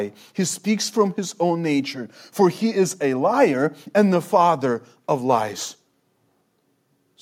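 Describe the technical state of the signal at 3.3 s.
At 3.3 s the speech signal is intact, with no audible technical fault at that moment.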